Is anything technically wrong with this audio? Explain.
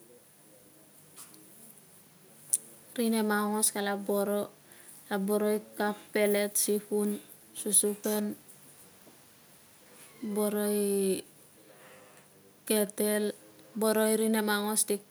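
No, nothing technically wrong can be heard in this speech recording. No audible fault turns up anywhere in it.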